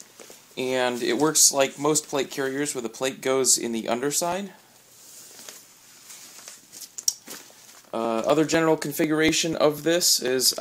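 From 4.32 s to 10.28 s, periodic USB or driver dropouts skip about 2 ms of audio every 0.248 s, roughly thirty times, giving evenly spaced ticks. A spectrogram shows regular thin vertical broadband lines, and the waveform shows matching abrupt jumps.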